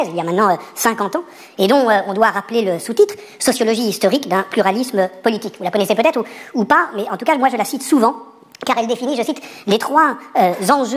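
From start to finish the audio plays with a wrong sample rate: material captured at one rate is being clocked out at a higher one with no resampling in between. Everything runs about 1.45 times too fast, and pitch rises with it by roughly 6.45 semitones, so the sound is both hurried and shrill. The ratio fits a recording made near 22 kHz being played back at 32 kHz.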